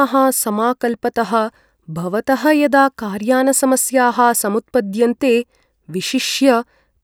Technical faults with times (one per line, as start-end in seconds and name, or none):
none